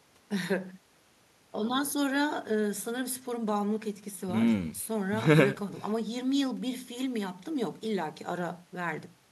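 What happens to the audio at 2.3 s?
Nothing goes wrong at 2.3 s; the speech continues cleanly through that moment with no audible fault.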